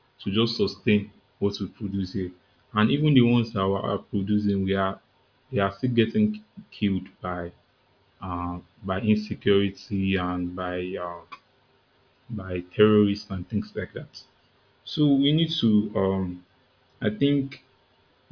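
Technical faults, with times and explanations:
No technical faults can be heard in the speech.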